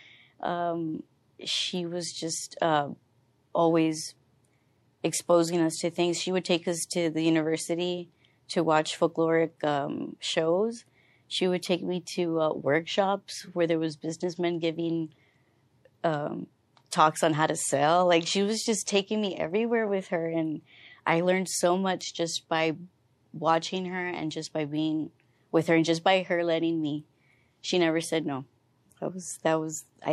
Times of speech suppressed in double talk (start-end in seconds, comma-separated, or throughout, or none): none